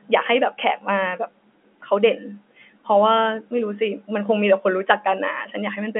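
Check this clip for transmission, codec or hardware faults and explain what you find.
Nothing here sounds amiss; the speech just has the narrow, telephone-like character of ordinary G.711 telephone coding, with the top end rolling off around 3.4 kHz, which is simply how that kind of line sounds.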